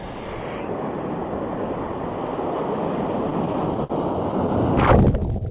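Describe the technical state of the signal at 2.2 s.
At 2.2 s the signal is intact, with no dropout, glitch or distortion, only the narrow band of a call path that carries nothing above 4 kHz.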